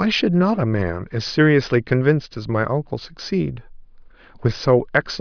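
No technical faults are audible.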